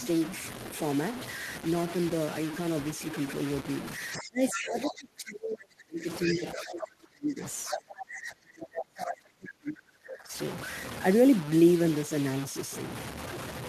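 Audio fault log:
Throughout: low bit depth without dither. The whole clip has a coarse, grainy edge that shifts with the speech, and quiet tails crumble or sputter. It's likely truncation to very few bits, around 5, leaving error only about 10 dB below the signal.
4.13–4.29 s, 4.48–4.65 s, 4.84–4.92 s, 6.23–6.35 s, 7.65–7.78 s: other side's voice leaking through. Short scraps of a second voice poke in, roughly 5 to 15 dB under the main speech. It's likely loudspeaker playback that the echo canceller didn't fully scrub from the mic.
4.16–6.07 s, 6.25–7.43 s, 7.68–10.33 s: speech suppressed in double talk. The main voice keeps ducking, hollowing out and breaking up, sinking by around 35 dB at worst. It's likely the echo canceller couldn't tell the two apart and clamped down on both.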